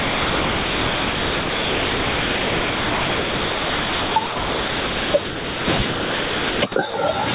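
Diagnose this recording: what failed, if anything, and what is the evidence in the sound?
Gain pumping runs through the whole clip, and it's most likely a capture or call-processing problem: input gain set way too hot with a fast limiter clamping down on every loud syllable. The gain swings by around 15 dB, so loud and soft parts sit squashed close together. The room noise itself, about 32 dB under the speech, is just part of the recording.

The second fault is sound dropped by the voice detector, again in call processing. At 0.00–4.16 s, 4.26–5.14 s, 5.26–5.68 s, 5.78–5.80 s, 5.90–6.62 s, 6.72–6.76 s and 6.90–6.94 s the speech gives way to steady comfort noise and then snaps back. The likely cause is the sender's detector mistaking quieter speech for background and halting transmission while the receiver fills the gap. This comes over the call path's G.711 A-law narrowband audio, with nothing above 4 kHz.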